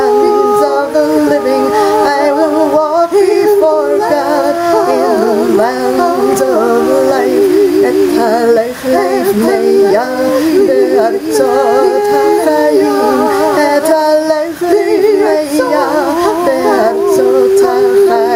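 Gain pumping runs throughout: the gain swings by around 10 dB, ducking under each loud sound, likely from excessive input gain driving a fast limiter.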